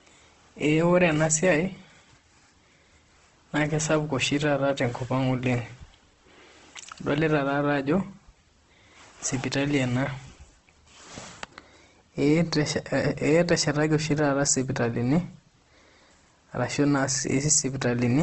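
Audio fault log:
Throughout, Opus compression: the speech sounds rough and grainy, with tonal parts turned noisy and nothing above 8.3 kHz. This is likely a low-rate Opus encode that fills starved bands with folded or noise energy, which fits a bitrate near 16 kbps.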